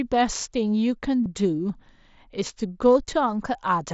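Concealed Bluetooth headset packet loss from 1.24 to 1.26 s: a short run of headset packets was lost and patched with repeated recent waveform, leaving a brief buzzy tone and slight warble.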